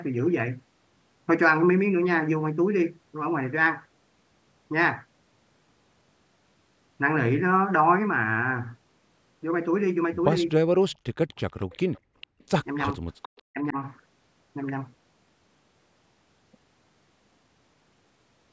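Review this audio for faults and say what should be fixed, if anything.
Echo leak at 10.91 to 10.96, 11.6 to 12.0, 12.21 to 12.44 and 13.22 to 13.42 s: a faint delayed copy of the speech trails it by 445 ms. It starts very low and grows louder with each return, from far below the speech to roughly 20 dB under it. The far end is likely playing the call on a loudspeaker, and its echo canceller is letting part of its own microphone pickup through and back. Retuning or re-converging the far-end echo canceller, or having that side use a headset, would prevent this.

Speech suppressed in double talk at 11.14 to 11.39, 12.96 to 13.02 and 13.5 to 13.76 s: the speech dips sharply, by something like 35 to 40 dB at its deepest. The likely cause is that both sides were talking at once and the echo canceller could not tell the local talker from loudspeaker echo, so it turned both down. An echo canceller with better double-talk detection, or a headset that removes the echo path, would prevent this.

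Background gated by the echo canceller at 12.01 to 12.39 s: the room sound drops by about 31 dB for roughly 300 ms, overlapping the echo burst, and comes back once the canceller releases. It clamped the microphone hard while the loudspeaker was active, taking the ambience with it. Gentler suppression, or comfort noise to fill the gap, would prevent this.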